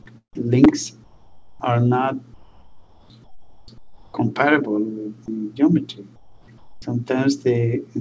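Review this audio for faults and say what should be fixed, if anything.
Chunks out of order: at 0.64 to 0.66 s, one short chunk of about 5.8 ms was delivered one position late, so it plays after the chunk that should have followed it. Nothing is missing, but the brief reordering creates three hard joins within about 12 ms, heard as a tiny jumbled glitch, possibly with a click. To prevent it, make the jitter buffer or writer reorder chunks by sequence number or timestamp before playout.

Comfort noise in place of the background: the sending side appears to have stopped transmitting during quiet stretches, and the receiver likely filled those gaps with synthetic noise. The real background sits about 30 to 32 dB below the loud passages, and in six pauses it gives way to smoother noise about 9 to 12 dB quieter: 1.04 to 1.60 s, 2.34 to 3.10 s, 3.24 to 3.68 s, 3.78 to 4.14 s, 6.16 to 6.48 s and 6.58 to 6.82 s. 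To prevent it, disable discontinuous transmission or improve the comfort noise estimate so it matches the real background's level and tone.

The call codec path itself shows its expected limit: nothing above 8 kHz.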